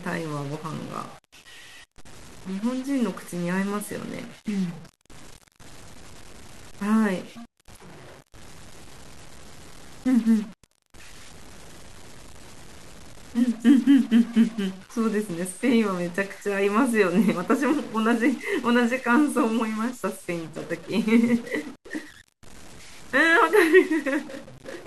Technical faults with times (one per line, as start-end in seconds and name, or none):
0.00-24.86 stuck bit